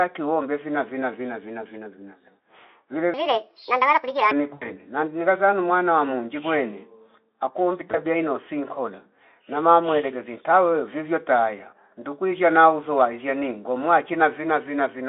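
From 3.14 to 4.31 s, a section at the wrong speed: the audio was likely played against the wrong clock, about 1.51 times too fast. The speech turns hurried and jumps up in pitch by roughly seven semitones, then drops back to normal.

At 4.54 to 4.72 s, VoIP packet loss concealed by the speech codec: about 80 ms of data went missing, which fits four lost 20 ms frames. The decoder filled the gap by stretching its last pitch and filter at falling gain, so the sound smears into a fading stretch before "namghiza zana mwana wa" resumes weak or distorted. The same happens on a smaller scale at 7.92 to 7.99 s, just after "wa monji kwene akuombi", where a single lost frame of about 20 ms leaves a short smear that takes a moment to recover.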